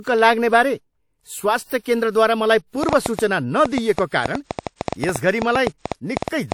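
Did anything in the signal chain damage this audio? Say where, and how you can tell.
Yes. At the codec stage, the speech was likely squeezed through a low-bitrate encoder and then saved again at a high bitrate: low-bitrate audio saved at a high bitrate. The larger file cannot restore what was discarded, so the first encoding's artefacts persist throughout, and nothing sits above 19.3 kHz.

A train of clicks, likely from electrical interference in the analogue wiring or a struggling interface, runs from 2.83 s to 6.53 s. It injects roughly 30 similar pulses at an irregular pace of about 7.3 per second, peaking well above the speech and audible in pauses too.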